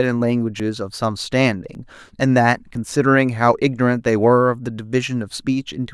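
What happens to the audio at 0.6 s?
At 0.60 s the speech jumps abruptly. There is no gap of silence. The sound simply skips forward, with roughly 20 ms missing. The likely cause is a dropped buffer (overrun). The recording software did not read its block of samples in time, and the hardware overwrote it. That block was lost, and the audio on either side was spliced straight together. The sudden join produces the small jump.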